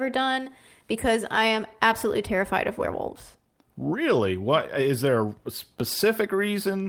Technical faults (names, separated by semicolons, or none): none